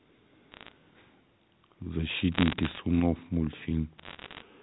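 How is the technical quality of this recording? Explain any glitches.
The recording has three bursts of bit errors on a digital phone line, from 0.52 to 0.72 s, 2.32 to 2.80 s and 3.98 to 4.42 s. Corrupted bits on the 64 kbps A-law G.711 link each spoil a single sample, and the later two bursts carry a higher error rate, under one percent. Flips in the top bits, or in the sign of a loud sample, throw a sample far off, so each burst is heard as sharp ticks and crackle over the band-limited telephone speech.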